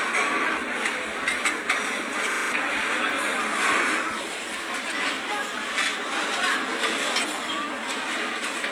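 At 2.32 s the sound locks into a system hang loop lasting until 2.52 s. A single 40 ms slice of audio repeats exactly five times because the computer or driver stalled while the sound hardware kept replaying the same buffer. At 25 repeats per second it comes across as a brief rattling stutter, and about a fifth of a second of real audio is lost. Unlike packet-loss concealment, each repeat is identical, with no fading or smoothing.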